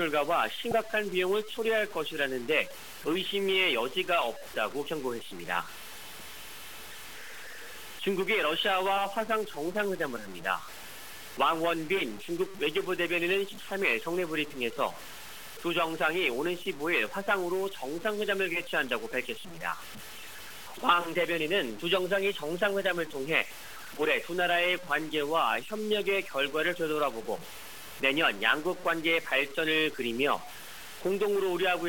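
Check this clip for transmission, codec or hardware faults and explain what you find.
Low bit depth without dither runs for the whole clip. The grain tracks the signal, so quiet passages turn gritty and the faintest parts sputter or drop out. The distortion sits only about 20 dB below the signal, which fits likely truncation to 6 bits without dither.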